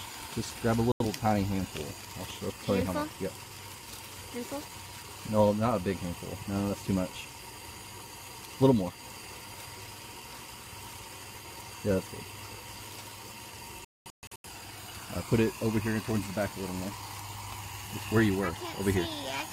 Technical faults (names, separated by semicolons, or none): digital broadcast dropout